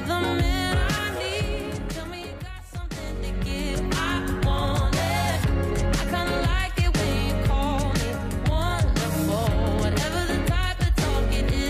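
No technical fault can be heard anywhere in the recording, and the signal stays continuous and intact throughout.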